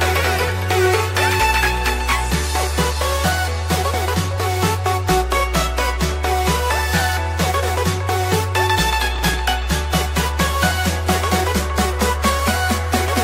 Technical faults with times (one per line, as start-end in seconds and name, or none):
9.15-9.34 processor overload crackle